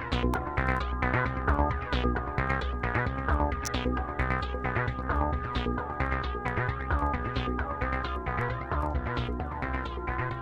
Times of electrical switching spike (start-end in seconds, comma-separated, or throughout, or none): 0.34, 3.65-3.67